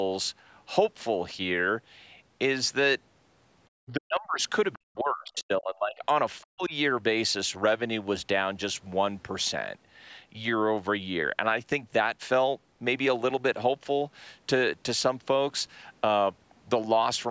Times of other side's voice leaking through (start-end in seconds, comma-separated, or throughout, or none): 5.36-5.42